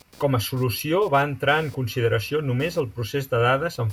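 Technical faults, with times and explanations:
Throughout: computer activity noise, a buzz pulsing near 200 Hz, about 30 dB below the speech. Computer load changes shift the shared audio ground.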